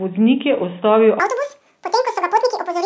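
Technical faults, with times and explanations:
1.20 to 2.86 s, wrong sample rate: right after "je ustavil", the samples are read out at twice the rate they were captured at, with no conversion, which fits 8 kHz audio played at 16 kHz. The speech runs at double speed and jumps a full octave, 12 semitones, higher.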